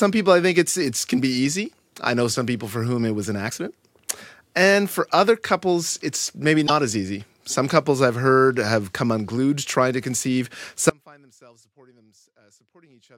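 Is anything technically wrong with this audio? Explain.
Yes. At 3.47 to 3.52 s, after "whom it was an", and at 6.64 to 6.70 s, between "other couples it's maybe" and "as easy", there is damaged data in the compressed stream. The decoder loses frame sync on corrupted bytes, producing short glitches. From 10.90 s, after "unglued trying to conceive", the speech drops to a faint residue roughly 30 dB down until the end. This is likely an audio dropout, with the downstream path still live.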